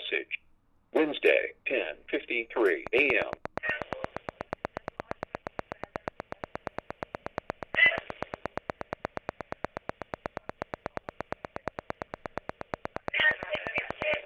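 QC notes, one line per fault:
2.87–14.15 s, train of clicks: regular ticking at about 8.4 per second, roughly a hundred near-identical pops standing around 15 dB above the sound, likely from electrical interference or a faulty connection or power supply; a spectrogram shows evenly spaced thin broadband vertical lines, the waveform matching narrow spikes.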